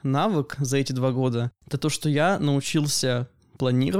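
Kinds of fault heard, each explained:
No technical fault can be heard in this speech recording. There is nothing to list here, as no kind of fault turns up anywhere in the audio.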